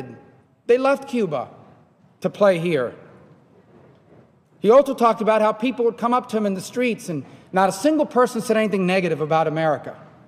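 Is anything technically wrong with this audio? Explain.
No, nothing technically wrong can be heard in this audio. No part of the clip stands out as faulty at any point.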